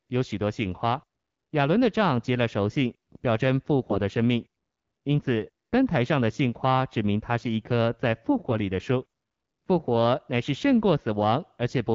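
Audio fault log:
3.80–3.99 s, AMR bit errors: for about 0.19 s the speech turns hoarse and gargly, as flipped low-priority bits scramble pulse placement and fine pitch and gain values.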